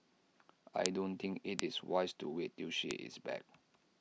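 Bit error spikes occur at 0.86, 1.59 and 2.91 s, where flipped bits make one or two samples jump (about -10, -10 and -16 dBFS) and return, giving sharp ticks unrelated to the speech: one- or two-sample needles in the waveform, thin full-height vertical lines on the spectrogram.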